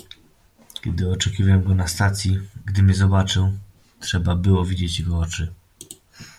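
No faults are audible anywhere in the recording.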